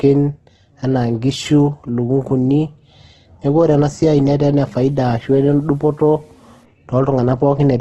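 It's a speech clip with a coarse, grainy texture all the way through, which is likely Opus compression in its music mode. There's nothing above 12.2 kHz, and the bands that are there sound rough and noisy rather than hollow, which fits a heavy squeeze down to around 12 kbps. From 4.68 to 6.65 s a gritty distortion rides along with the sound, with its error sitting roughly 45 dB below the signal. That's likely low bit depth without dither, with the samples truncated to something like 9 bits, so the quieter stretches turn sandy.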